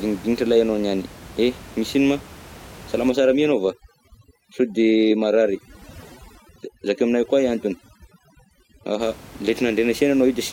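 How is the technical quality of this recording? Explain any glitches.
The recording has one clear fault, overdone noise removal, from 3.10 s to 9.01 s. Before that, room noise sits about 21 dB below the speech. In this stretch, a noise reduction stage is working far too hard. It treats any frequency band close to its noise estimate as noise and pushes it down or off. Soft parts of the speech fall below that line and vanish too. The background drops and breaks up into twinkling, warbling specks.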